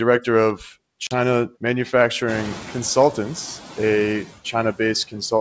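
Noise suppressor artifacts run through the whole speech clip. The steady background is cut by about 11 dB, sinking between words and rising again under them.

From 1.07 to 1.14 s there is packet loss on the ADPCM call. A few packets vanish into a hard-edged 40 ms silence. The decoder's predictor then restarts out of step, so speech returns slightly distorted.

From 2.28 to 2.82 s, the noise suppressor is catching up. The room noise jumps by about 22 dB around 2.5 s. The suppressor's estimate lags, so the noise is cut by only about 5 dB at first. It then sinks over 540 ms. The wideband G.722 coding underneath sounds consistent with 64 kbit/s.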